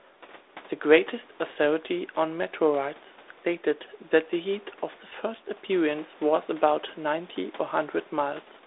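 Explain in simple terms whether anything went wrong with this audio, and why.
Nothing went wrong: the speech passed through a call's microphone processing and a G.726 ADPCM telephone link that work as intended, keeping it to the usual narrow phone range of roughly 300 Hz to 3.7 kHz, and no fault shows up anywhere in the recording.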